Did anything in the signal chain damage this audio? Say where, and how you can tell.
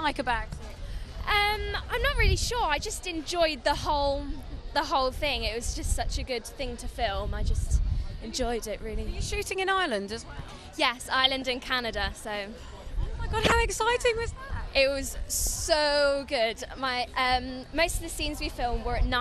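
Yes, at the codec stage throughout. The whole clip is dull, with the top end missing and a gurgling, granular texture: MP2 compression, likely at a low rate, consistent with about 80 kbps. With too few bits, Layer II switches off its upper sub-bands, and the bands it keeps are quantised coarsely. The remaining high-frequency detail flickers in and out, and that is what produces the grainy, underwater quality.

The transmission path adds DAB burbling in three short bursts: 11.24 to 11.42 s, 13.45 to 13.52 s, and a brief blip at 15.47 s. Weak reception lets bit errors, at a low fraction of a percent, slip past error correction into the MP2 frames. Corrupted samples then put short blips of noise into single sub-bands, and corrupted scale factors make sub-bands jump in level for up to a frame.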